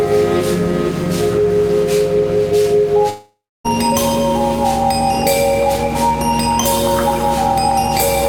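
At 3.09 s the music breaks off in what sounds like a long network dropout. The last sound is stretched into a fading buzz, which thins out into about 290 ms of silence before the music returns at 3.66 s, with roughly 560 ms of the passage missing. The likely cause is audio that stopped arriving. Unlike a brief packet loss, which is patched almost invisibly, this gap is long enough that the fill decays audibly and the music resumes further along.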